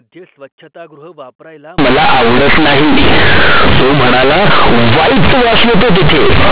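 Companded audio read as linear runs from 1.78 s to the end: mu-law bytes play as raw 8-bit samples, so the speech becomes loud and buzzy, with heavy noise in pauses.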